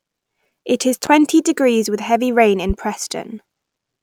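A sudden voltage step, likely from a plug, switch or static discharge, twice enters the signal path, producing a loud pop each time. The first, from 1.06 to 1.09 s, lands just before "degrees with heavy rain". The second, from 2.70 to 2.73 s, follows "degrees with heavy rain". Each is a single sharp thump peaking a few decibels above the speech, which continues underneath without a break.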